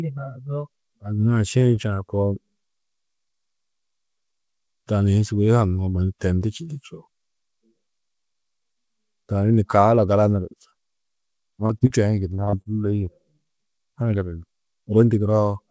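Three bursts of short concealed packet loss fall close together at 11.66 to 11.72 s, 11.78 to 11.84 s and 11.87 to 11.93 s. In each, about 30 ms of audio failed to reach the decoder in time, and the receiver filled the hole by extending the preceding sound, pitched where it was voiced and as shaped noise where it wasn't, before crossfading back. Each one is heard as a brief smear or wobble, and a quick consonant can drop out.

From 12.35 to 12.68 s the trouble turns into repeated packet loss with a robotic sound. Packets went missing four times in about a third of a second, the longest gap 37 ms, so roughly 38 percent of that span is synthetic fill. Each patch barely ends before the next begins, and the sound becomes choppy with pieces missing. Throughout, the call path's wideband codec cuts everything above 8 kHz, which fits G.722 at 64 kbps.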